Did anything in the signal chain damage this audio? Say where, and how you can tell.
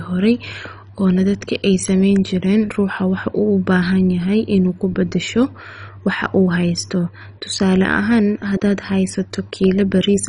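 Yes, and it's at the codec stage. Across the whole speech clip the top end is gone, with nothing above about 10.4 kHz. What's left has that gurgly, grainy texture, with high bands flickering in and out. That's classic MP2 compression, likely at a starved rate, roughly 32 kbps. Layer II runs short of bits, so it shuts off whole upper sub-bands and quantises the surviving ones coarsely. That gives the dull, watery sound of low-rate digital radio.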